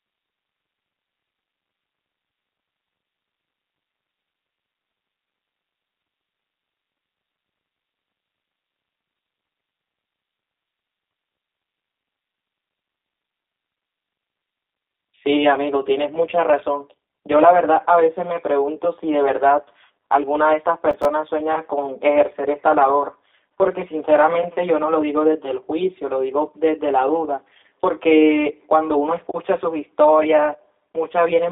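Throughout the whole clip, one channel arrives around 10 ms behind the other, and the two are summed to mono. This is channel delay, heard as comb filtering. Wherever the shared signal meets itself half a cycle out of step it cancels, which puts the first notch near 50 Hz and further notches roughly every 100 Hz above it. The speech therefore sounds hollow and phasey. A spectrogram shows these as fixed, evenly spaced dark horizontal stripes running through every syllable.

Also present throughout is G.729 codec damage, plainly audible and consistent with the 8 kbit/s G.729A variant. The line band runs from about 250 Hz to 3.7 kHz, and nothing passes above 3.8 kHz. The voice sounds thin, slightly rough and synthetic, because it is rebuilt from a filter model and a few pulses rather than carried as a waveform. On a spectrogram the energy stops at a flat ceiling near 3.8 kHz, the region below 250 Hz is weakened, and the harmonics look smeared.

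From 20.91 to 21.05 s, processor overload crackle tears through the sound. The processor missed several deadlines in a row, in keeping with buffers of roughly 5 ms, and each miss left a short stretch of silence with abrupt edges. In quick succession these gaps are heard as a gritty crackle lasting about 0.14 s. The waveform shows brief flat dropouts with vertical edges, and the spectrogram shows thin broadband vertical streaks at each break.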